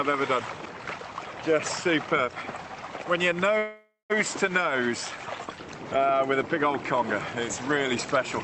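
At 3.58 s a call audio freeze begins: the last sound carries on as a fading buzz or hiss, about 180 ms of it silent, until audio resumes at 4.12 s exactly where it stopped. The likely cause is delayed packets emptying the jitter buffer. Unlike packet loss, nothing is skipped; everything after simply arrives about 0.52 s later.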